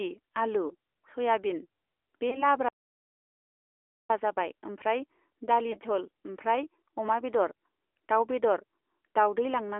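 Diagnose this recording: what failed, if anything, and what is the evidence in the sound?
The whole clip has been through the AMR narrowband mobile codec, at the codec stage of a mobile call. The band is held to roughly 300 Hz to 3.4 kHz, and the speech has a plainly audible buzzy, synthetic edge. That fits the 8 kHz vocal-tract model running at a mid-rate mode of around 10.2 kbps. Plain band-limiting would sound dull but clean. This has coded roughness in every syllable.

Lost AMR speech frames occur at two points, as network damage concealed by the decoder. The first runs from 2.30 to 2.46 s and the second from 5.72 to 5.79 s. Each is a short dip or warble, and the voice returns weak or rough for a moment afterwards. The decoder repeated its last pitch and filter settings at falling gain, which fits a single lost 20 ms frame each time. An unconcealed gap would leave a hard hole instead of this smeared patch.

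A playback stall follows at 2.68 s. The sound stops in mid-flow and stays silent for about 1.41 s, resuming at 4.10 s. Because there is no fading tail, the silence is not frame concealment. The likely cause is the player's buffer running dry or its output thread being blocked, and it is a playback-stage fault rather than anything in the codec.

Time-compressed catch-up runs from 4.10 to 7.10 s, where the speech is hurried to about 1.1 times normal speed while the pitch stays the same. The player is draining the backlog from the stall by cutting out and cross-fading small pieces. A sample-rate error would shift the pitch along with the speed. The lost frame at 5.72 s falls inside this hurried stretch.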